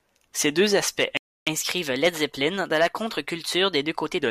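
At 1.17 s the speech cuts to silence for about 0.30 s, until 1.47 s. This playback stall likely means the player ran out of data or its thread was blocked. From 1.47 s to 4.18 s the speech runs 1.1 times fast and about a semitone and a half sharp. This is catch-up at higher speed: the player resamples its backlog to recover lost time.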